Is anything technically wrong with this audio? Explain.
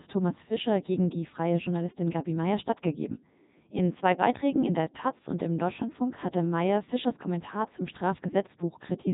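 Yes. Throughout the speech, the Codec 2 vocoder is audible. Only pitch, voicing, energy and a spectral envelope survive, and the decoder rebuilds the voice from sine waves, so it sounds buzzy and robotic. Heavy damage fits the 3.2 kbit/s mode, with nothing above 3.8 kHz.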